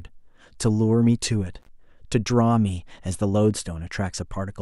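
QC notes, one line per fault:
1.60–1.68 s, intermittent contact: the speech drops out abruptly for about 41 ms. A loose cable or plug briefly loses its connection, so the signal path opens and the audio vanishes. The metal surfaces scrape as they part and meet again. That produces a crackle at both edges of the gap. While the line is open, only a faint hiss remains. Then the connection closes and the speech returns at full level.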